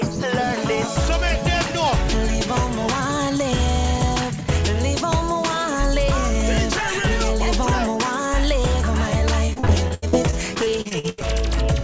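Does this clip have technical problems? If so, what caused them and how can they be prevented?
Yes. From 9.46 to 11.25 s there is repeated packet loss (robotic sound): missing stretches, up to 81 ms each, are filled by continuing the previous sound, covering about 30% of that span. The result is a choppy, robotic run of many closely spaced holes rather than a single dropout. A steadier network connection, a larger jitter buffer or forward error correction would prevent it.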